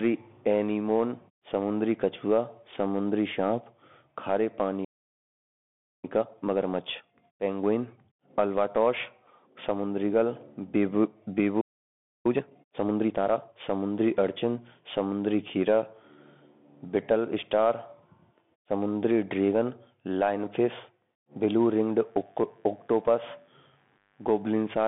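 From start to finish the speech carries Bluetooth CVSD headset codec damage. The band runs from about 150 Hz to 3.6 kHz, with nothing above 3.8 kHz. Unlike a plain band-limit, the one-bit delta coding, which fits a 64 kbit/s stream, adds granular hiss and scratchy sibilants where loud high content outruns the step size.

At 4.84 s a playback stall cuts the sound off mid-flow, leaving 1.19 s of silence until 6.04 s. The player was likely starved of data or blocked. It is a silent gap, which distinguishes it from a dropout concealed by looping.

Time-compressed catch-up follows from 6.04 to 9.04 s at 1.15 times speed as the backlog is trimmed. Small pieces are cut out and cross-faded, so the pitch stays normal. A simple speed-up would raise the pitch instead.

A second playback stall runs from 11.61 to 12.26 s, silencing the sound for 0.64 s, again mid-flow.

Stronger catch-up then runs from 12.26 to 13.54 s at 1.5 times speed. 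The hurrying is much more obvious here, though the pitch still holds steady.

From 21.75 s to the end, mains buzz enters. Harmonics of 50 Hz make a steady, raspy buzz about 40 dB below the speech. Its sharp, bright edge sets it apart from a smooth hum, which would be a pure low tone.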